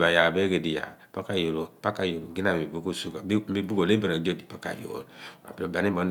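No technical faults detected.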